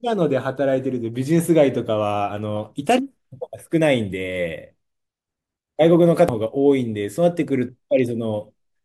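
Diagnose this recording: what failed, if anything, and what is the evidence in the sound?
At the codec stage, damaged data in a compressed stream produces a brief disruption in the speech from 6.29 to 6.32 s. Corrupted bytes there made the decoder misread those frames and lose sync until it found the next valid frame header.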